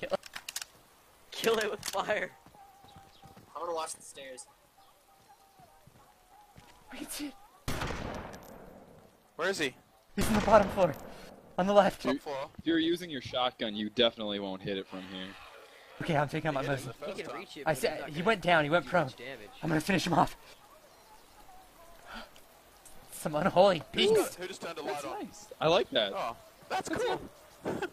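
From 3.93 to 8.56 s, digital radio blending to analogue: a 213 ms cross-fade to FM drops the level about 3 dB, with visible broadband hiss around 40 dB below the signal.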